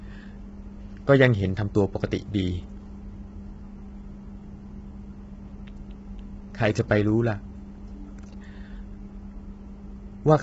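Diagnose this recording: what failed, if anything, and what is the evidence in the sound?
The failure sits at the codec stage and runs through the whole speech clip: the voice sounds rough and grainy throughout, with a noisy haze filling the gaps between harmonics and nothing at all above about 7.8 kHz. This is likely low-delay AAC compression of the AAC-ELD kind used for calls, with damage heavy enough to suggest a bitrate around 16 kbps. Its short frames cannot resolve the voice's harmonics cleanly, so quantisation noise smears between them. Simple band-limiting would leave the remaining band clean, and packet loss would come and go as gaps or glitches rather than staying constant.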